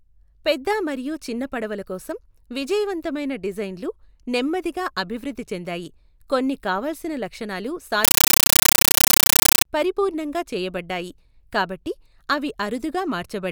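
From 8.05 to 9.65 s, right after "చెందాయి కొన్ని కావాల్సిన లక్షణాలు", the speech is replaced by very loud, harsh chattering static until "పరిపూర్ణంగా చేయబడ్డాయి కాబట్టి అవి" returns. This is a compressed stream played as audio: an encoded Dolby Digital stream was passed through as if it were plain samples instead of being decoded. Each frame comes out as a 9.33 ms noise burst followed by silent padding, repeating 31.25 times a second, which fits a 448 kbps AC-3 stream.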